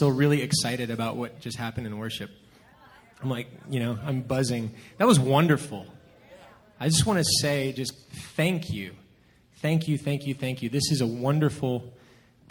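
Crude rate conversion runs throughout: nearest-sample repetition adds gritty, inharmonic fizz about 20 dB below the sound, which fits 32 kHz to 48 kHz. Spectrograms show mirrored, unrelated tones tracking loud highs.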